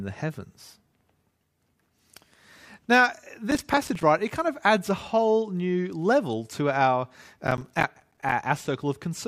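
The processor repeatedly missed its deadlines for short buffers, around 5 ms each, leaving silent gaps. This processor overload crackle tears gritty through the speech from 3.51 to 4.03 s, just before "right it kind of", and from 7.47 to 8.32 s, after "new level to our".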